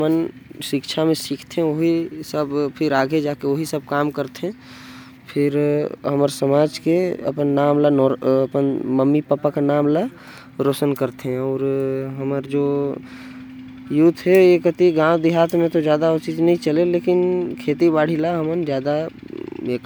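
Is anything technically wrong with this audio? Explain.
No, nothing is technically wrong with this audio.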